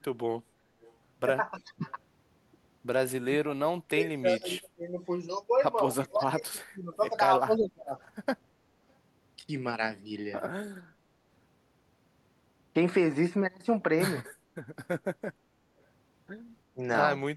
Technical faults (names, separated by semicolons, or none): echo leak; speech suppressed in double talk